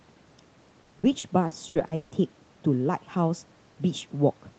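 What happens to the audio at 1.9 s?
The sound turns choppy, with pieces missing, part of repeated packet loss from 0.83 to 2.14 s: seven gaps, up to 160 ms each, patched by stretching the preceding audio.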